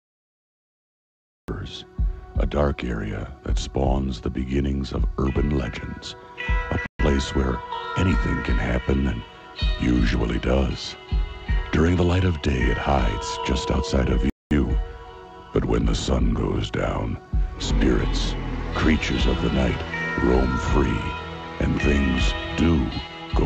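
The clip has a cut-off start: digital silence runs from 0 to 1.48 s, then the sound begins abruptly mid-event with no attack or fade-in, because capture started after the source was already playing. The entry is hard-edged rather than natural.

Two dropouts follow, at 6.86 s lasting 132 ms and at 14.30 s lasting 213 ms, where the sound cuts to silence and then resumes. This pattern points to a likely Bluetooth stall, with interference starving the headphone buffer until delayed packets arrived.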